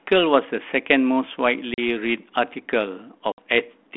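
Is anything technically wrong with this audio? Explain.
Yes. Packet loss on an ADPCM call occurs twice, at 1.74 to 1.79 s (about 40 ms lost) and at 3.32 to 3.41 s (about 60 ms lost, roughly three packets). Each gap is silence, so the waveform shows a flat, hard-edged hole and the spectrogram a blank vertical stripe. Afterwards the decoder's adaptive predictor and step size no longer match the sender's. Speech resumes slightly distorted before settling. The band stays within roughly 200 Hz to 3.5 kHz, typical of 32 kbit/s G.726.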